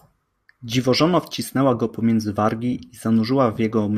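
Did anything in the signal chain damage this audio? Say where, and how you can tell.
No, nothing in the signal chain audibly damaged this speech recording. No stage from the wiring through to playback left a mark that can be heard.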